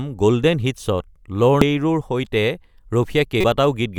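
A speech recording carrying two brief digital glitches: a very short glitch at 1.62 s and a longer one from 3.41 to 3.44 s. Both come from damaged data in a compressed stream. Bytes in those stretches of the encoded file were corrupted, so the decoder misread the affected frames, lost its place in the bitstream and had to hunt for the next valid frame header before clean playback resumed.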